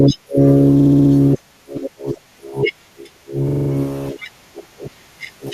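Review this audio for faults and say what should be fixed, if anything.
Repeated frames cause two stutters in the speech. From 0.79 to 1.11 s, a 64 ms block plays five extra times, adding 320 ms. From 3.48 to 3.69 s, a 43 ms block plays five extra times, adding 213 ms. The first block fits a run of three compressed frames and the second fits two. The decoder received the same frames again and replayed them, so the clip runs longer by those amounts. Fix the writer or transport so each frame is sent once and checked by sequence number.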